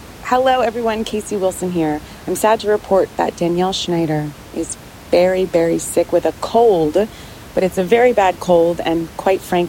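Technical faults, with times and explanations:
The speech signal is continuous and undisturbed, with only the room's own background noise audible, sitting about 21 dB below the speech.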